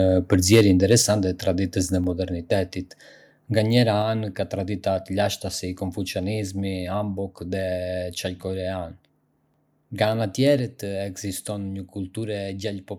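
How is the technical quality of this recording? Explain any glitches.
The recording has two related glitches near the start, both within about the first second.

From 0.32 to 0.95 s there is microphone overload. The loudest syllables take on a harsh, crackling edge, most likely because the microphone input was set too high, driving peaks about 4 dB past the converter's limit so their tops were sliced flat. Only a small share of samples, roughly one or two percent, are clipped. Unlike codec distortion, the grit appears only on the peaks and vanishes in quieter stretches.

At 1.02 s the microphone volume is stepped down. Voice and background noise both drop by about 4 dB in a single instant, which points to the call software having likely spotted the clipping just before and cut the device's input gain in one move. Unlike a noise gate or a fade, it is one abrupt step.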